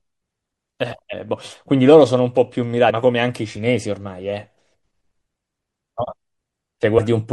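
Heavy MP3 compression, likely at around 64 kbps, switches weak frequency lines on and off, so the speech sounds watery and swirly throughout. At 1.12 s, 2.89 s and 6.97 s, compressed frames are skipped: several 24 ms frames never play, so the speech jumps ahead, roughly 150 ms at the first and about 100 ms at the others, each join a brief smeared blip.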